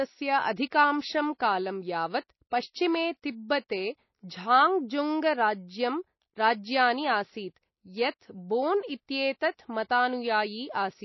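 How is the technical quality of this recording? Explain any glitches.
Quality's pretty rough, with plainly audible codec damage running through the whole recording. The speech sounds watery and swirly, with nothing above 5.8 kHz. That's likely MP3 compression at a low bitrate, around 24 kbps, cutting the treble and flickering weak frequency lines.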